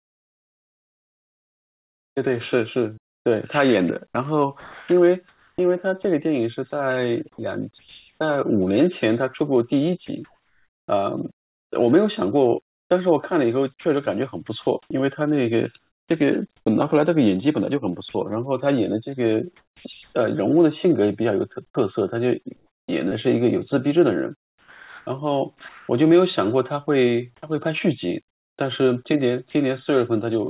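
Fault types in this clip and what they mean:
Sound chopped by the voice detector: the sender's activity detector likely kept cutting transmission on and off, swapping quiet syllables and word edges for comfort noise. Between about 3.0 and 10.9 s, and again from 13.8 to 25.9 s, the speech turns choppy. A spectrogram shows speech energy interrupted by flat, even noise patches, and the waveform shows matching level flicker.
Sound dropped by the voice detector: a brief quiet portion was likely judged as background, so sending stopped for 40 ms at 29.51 s and comfort noise filled the gap. On a waveform this is a short, steady, low-level segment, and on a spectrogram a thin band of uniform noise breaking the speech contours, all under the 4 kHz ceiling of the call path.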